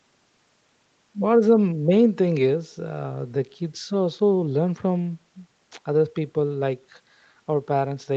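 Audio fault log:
No faults to log here, just speech carrying the usual marks of a call path, with everything above 8 kHz gone, which fits an Opus link at 32 kbps.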